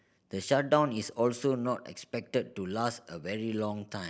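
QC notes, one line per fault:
Nothing to flag here, no faults turned up anywhere in the speech.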